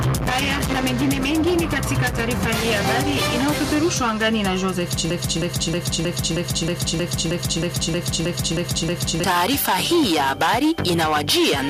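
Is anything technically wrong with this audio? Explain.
Yes, there are two faults. Throughout the clip there is gain pumping. The input gain is likely set far too high, with a fast limiter or compressor clamping down on each loud sound. The level swings by about 10 dB, leaving the sound squashed.

From 5.10 s to 9.24 s there is a broken-record loop. The player, encoder or stream likely stalled and kept resending its last held fragment. A 0.32 s piece repeats exactly, back to back, 13 times, and the audio that belonged in that stretch is lost.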